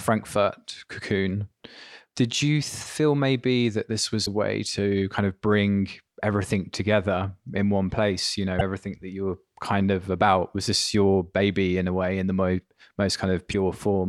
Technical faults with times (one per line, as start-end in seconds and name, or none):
4.22-4.28 damaged data in a compressed stream
8.56-8.61 damaged data in a compressed stream
13.49-13.55 damaged data in a compressed stream